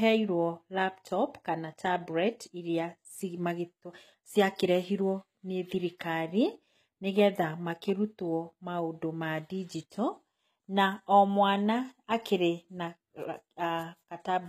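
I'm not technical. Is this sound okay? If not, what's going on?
No. The whole recording has the sound of HE-AAC compression, likely the cause of its artificial treble. To save space, this kind of compression keeps the lower part of the sound and then fakes the upper part by copying the lower part upward. The result stays bright but isn't the real thing, so the s sounds in this speech come out gritty and metallic, and nothing at all survives above about 15 kHz.

There is also a brief pre-echo at 9.90 s, right after "maũndũ ma". The compression handles sound in small chunks and spreads its noise across each chunk. Here a sharp sound near the end of a chunk pulls a short hiss, about 17 milliseconds long, into the quiet moment just before it. The start of that sound comes across softened and smeared rather than crisp.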